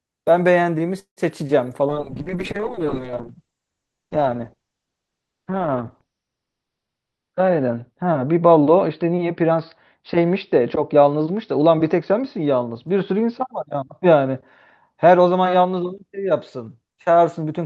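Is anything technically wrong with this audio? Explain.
Yes, there are three problems, all typical of audio that has come through a call.

From 0.99 to 1.20 s there's a call audio freeze. The receiver ran out of audio, most likely because packets were held up on the way and the jitter buffer emptied. For about 170 ms it fills in by stretching the last bit of sound into a fading buzz that drops to near silence for around 110 ms. When packets arrive, the speech picks up exactly where it stopped, so nothing is lost. You just get a gap and a bit of added delay.

From 1.92 s to the end there's a call bitrate drop. The bandwidth estimate fell and the Opus encoder went from 32 kbps down to 7 kbps, staying at the bottom for about 5 s. At that rate it codes much more coarsely and cuts the top end, going from around 20 kHz down to 6 kHz. The speech turns muffled and a bit rough and watery, and it doesn't recover before the clip ends.

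From 6.46 to 7.71 s there's a jitter buffer speed-up. The buffer was holding more audio than it wanted, so the receiver trimmed many tiny pitch-period-sized slices in a row, about 150 ms in total. The speech runs at roughly 112% speed over that stretch. The pitch stays the same, but it comes across as a bit hurried compared with the surrounding speech.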